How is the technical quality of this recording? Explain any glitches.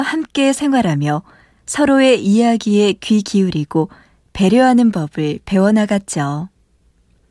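Nothing in this recording stands out as a glitch, so there's no technical fault to point to here.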